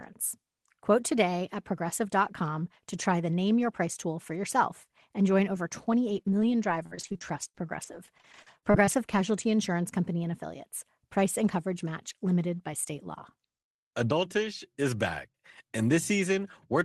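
From 5.55 to 9.19 s the speech suffers repeated packet loss (robotic sound): a dense run of short gaps, the longest 55 ms, each patched by stretching the preceding audio. Roughly 0.4 s is rebuilt this way, leaving a choppy texture.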